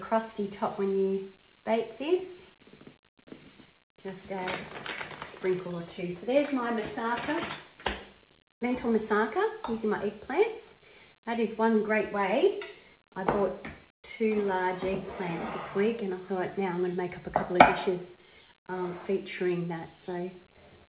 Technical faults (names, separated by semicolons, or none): none